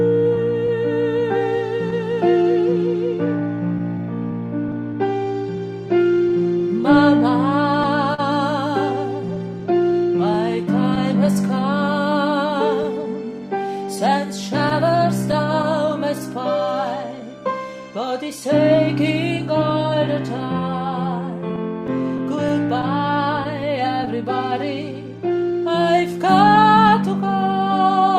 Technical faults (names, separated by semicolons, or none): clock drift between sender and receiver; repeated timing corrections; scattered short gaps